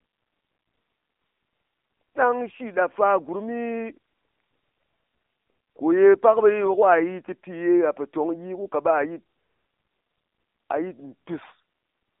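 Speech that sounds muffled, boxy and buzzily synthetic from start to finish, with nothing above 3.8 kHz and the band running from 250 Hz to 3.7 kHz. That is AMR narrowband mobile codec damage: a phone-band vocal-tract model, its coarseness fitting a low rate near 7.4 kbps.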